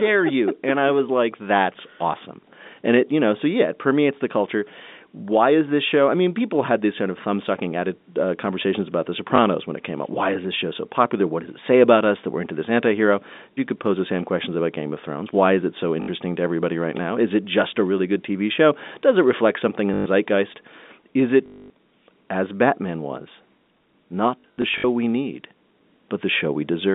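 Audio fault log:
9.36, 16.02–16.08, 19.94–20.06, 21.46–21.70 and 24.40–24.84 s, packet loss with last packet repeated: the last chunk loops until fresh audio arrives, so longer runs buzz at about 50 Hz, which fits 20 ms packets. The last stretch is scattered, with runs up to 60 ms.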